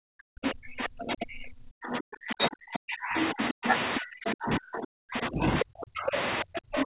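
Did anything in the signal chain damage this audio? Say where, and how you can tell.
Yes. The damage happens in the call processing stage, at the echo canceller.

Speech suppressed in double talk runs from 0.0 to 3.65 s and again from 3.99 s to the end, near 6.9 s. The talker's level falls in uneven chunks, by as much as about 40 dB, for roughly 3 s in the first stretch. On the waveform this shows as gaps cut into otherwise continuous speech. On the spectrogram, whole columns go dark across the band. The likely cause is the canceller failing to separate the near talker from loudspeaker echo and attenuating both.

The other side's voice leaks through at 0.44–0.83 s, 1.92–1.98 s, 3.21–4.31 s, 6.13–6.18 s and 6.76–6.84 s. This is likely echo that the canceller did not fully remove from the microphone. It sits a few dB to about 10 dB below the talker, and the last fragment is roughly level with it. 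On the spectrogram it appears as a second, independent set of harmonic traces overlapping the main voice, still inside the 4 kHz ceiling of the G.711 call path.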